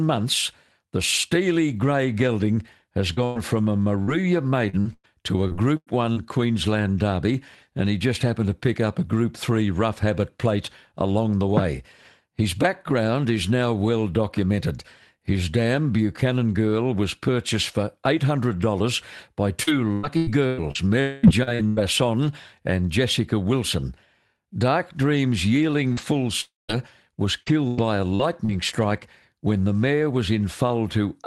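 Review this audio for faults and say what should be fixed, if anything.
Repeated packet loss makes the sound choppy and robotic at 3.13–6.26 s, 19.63–21.79 s and 25.93–28.51 s. Brief gaps, none longer than about 107 ms, are each patched by stretching the last sound. Unlike one long dropout, these patches recur rapidly and never fade to silence. Forward error correction and a deeper jitter buffer would prevent this.

At 21.01–21.26 s a held buzz continues for about a quarter second. At 26.41–26.72 s the sound fades into 170 ms of silence and returns with a piece missing. The likely cause is a long network dropout, which differs from the short repeating patches around it. A steadier connection or redundant packet transmission would prevent it.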